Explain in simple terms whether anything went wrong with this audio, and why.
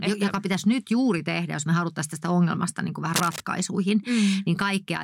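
Yes, one problem: from 3.14 to 3.41 s there is cable scratch noise, a burst of scratchy, rustling crackle almost as loud as the speech. It was likely caused by a worn cable or connector being moved, making the electrical contact flicker.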